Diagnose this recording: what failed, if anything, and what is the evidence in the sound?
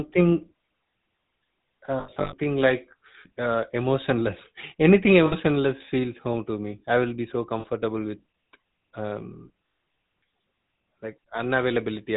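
The GSM full-rate codec damaged the whole recording at the codec stage. The speech has a plainly audible buzzy, gravelly roughness, consistent with a 13 kbps full-rate coder. A spectrogram shows nothing above 4 kHz, and the harmonics look grainy and smeared by the pulse-driven excitation.

Lost GSM frames, a network-stage fault, occur at 2.00–2.34, 5.26–5.34, 7.60–7.65 and 9.66–9.82 s. Each gap was filled by repeating the last good frame, so it sounds like a metallic ring. On a waveform these gaps appear as repeated cycles.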